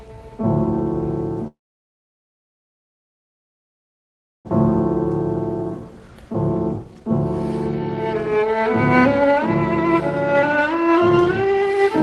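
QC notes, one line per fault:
1.47 to 4.53 s, long network dropout. The sound stops and is briefly carried on by a fading fill. It then sits in near silence for almost the whole three seconds. When the audio returns, it picks up further along, with about 1.6 s of material never heard. This is likely a long stall in arriving audio. The receiver hid the gap and then resumed later, after a delay shift of roughly a second and a half.
5.37 to 11.92 s, jitter buffer speed-up, in four runs: 5.37 to 6.34 s at 111% speed, 6.77 to 7.12 s at 175%, 7.67 to 9.37 s at 120%, and 9.84 to 11.92 s at 119%. The pitch stays put, but the timing rushes. After the dropout the buffer held too much audio. The receiver trimmed short pitch-period slices again and again, around a second in total, to pull the delay back down.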